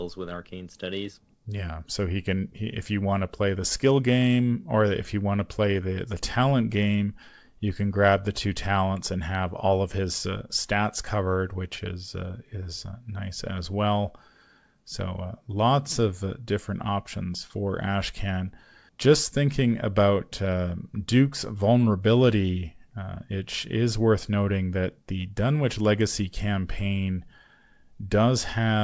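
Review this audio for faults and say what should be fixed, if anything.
Nothing here needs fixing; the speech just comes through a G.722 call path at 64 kbps, so there's nothing above 8 kHz, which is simply how that codec works.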